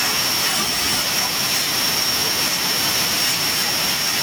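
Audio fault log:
No audible faults in this speech recording.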